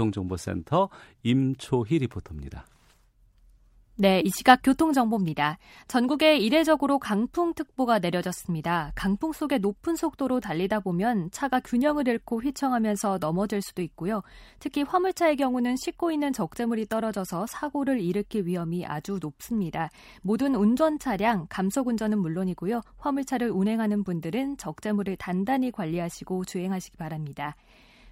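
No technical faults are audible in the speech recording at any point.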